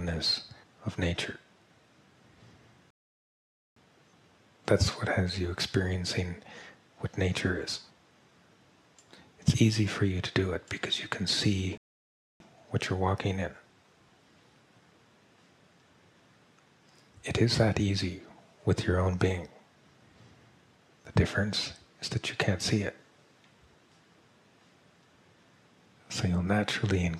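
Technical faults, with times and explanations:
2.90 to 3.76 s and 11.78 to 12.40 s, rebuffering stall: the audio drops to silence for 0.86 s, then 0.63 s, and resumes exactly where it stopped. The player exhausted its downloaded audio and waited for more, so nothing is lost, but time is added.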